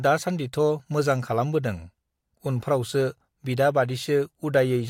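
No technical faults can be heard anywhere in the speech. There is nothing to mark at any point in the recording.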